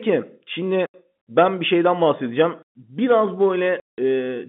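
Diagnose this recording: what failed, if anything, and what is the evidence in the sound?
The failure is in the network stage: packet loss filled with silence. The speech drops to dead silence twice, from 0.86 to 0.94 s (about 80 ms), just before "ben bir şeyden bahsedeceğim", and from 3.80 to 3.98 s (about 180 ms). Both holes start and stop abruptly, and their lengths are both multiples of 20 ms, which fits 20 ms packets. The receiver had no concealment and simply played zeros for each missing packet. The G.711 telephone coding band of about 150 Hz to 3.6 kHz comes through intact on both sides of the gaps.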